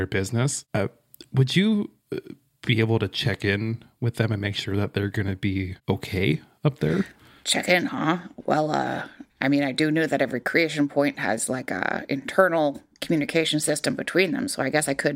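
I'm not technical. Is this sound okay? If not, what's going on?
Yes, no faults turn up anywhere in this speech recording.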